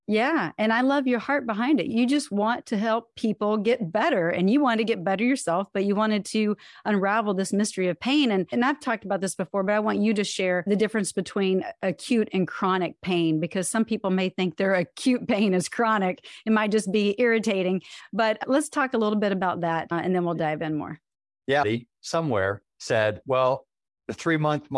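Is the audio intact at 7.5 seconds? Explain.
Yes, at 7.5 seconds the speech plays through intact, with no dropout, click, distortion or other fault at that moment.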